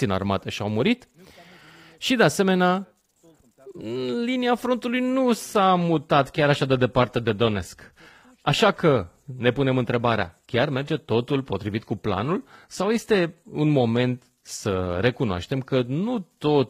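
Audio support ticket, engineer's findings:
Speech, 5.17 s to end of clip: sudden quality drop with no gap, and adaptive stream at a lower bitrate. Treble turns synthetic and band-limited, nothing above about 14.9 kHz. Codec artefacts rise. Sound points to a switch from about 96 kbit/s AAC-LC to about 20 kbit/s HE-AAC. The player picked the lower rendition after the connection slowed, and spectral band replication rebuilds the highs.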